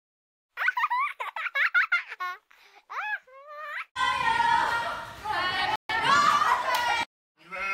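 At 5.76 s the sound stops dead for about 137 ms. This is a playback stall, likely from the player running short of data. It resumes at 5.89 s. From 5.89 to 6.15 s comes time-compressed catch-up. The player trims its backlog, running at 1.5 times speed. Pitch holds steady.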